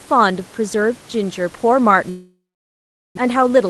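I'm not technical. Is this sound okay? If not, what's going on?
No. From 2.09 to 3.19 s the sound stalls: the last bit of speech drags on as a fading buzz, and then there is about 0.76 s of near silence before the speech returns with part of it missing. That is most likely a long network dropout. For a moment no audio arrived over the connection, so the receiver filled the gap with a stretched echo of the last sound. When the audio came back, roughly 0.6 s of speech had been lost for good.

Right after that, from 3.27 to 3.65 s, the speech runs a little fast, about 8% quicker than normal, while the pitch stays the same. This is a jitter buffer speed-up. After the dropout, audio piled up in the receiver's waiting area, adding roughly half a second of delay. To catch up, the receiver snipped out many tiny slices, a few hundredths of a second in total, so the speech sounds slightly hurried. 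The faint room noise in the background belongs to the original recording.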